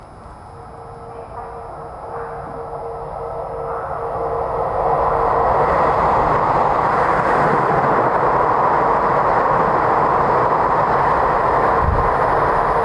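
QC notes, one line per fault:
Nothing to flag here; I listened all the way through and didn't hear any technical faults.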